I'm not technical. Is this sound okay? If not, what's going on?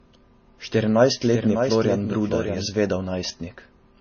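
No. All the way through, the speech sounds dull and garbled. Nothing is heard above about 6.9 kHz. This is transcoding between lossy codecs. The audio was likely squeezed by one compression format and then squeezed again by another. Each step added its own damage.

From 1.22 s to 2.66 s, the speech is heard twice. A second copy trails behind by roughly 0.7 seconds. It is a bit quieter, with no room echo. It starts and stops suddenly. This is a doubled audio track. It likely comes from a second, slower recording path or an editing slip.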